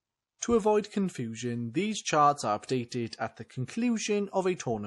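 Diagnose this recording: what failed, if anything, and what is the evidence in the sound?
The codec stage failed throughout this speech clip. Nothing is present above 11.5 kHz, and plainly audible watery, swirly artefacts come and go as weak frequency lines are dropped frame by frame. The likely cause is MP3 compression at a rate consistent with about 48 kbps, too few bits for clean coding.

Pre-echo, also from the codec, appears from 0.39 to 0.42 s, a 36 ms smear of hiss just ahead of an attack. The transform spread quantisation noise across its whole block, so noise meant for the loud onset leaked into the quiet moment before it.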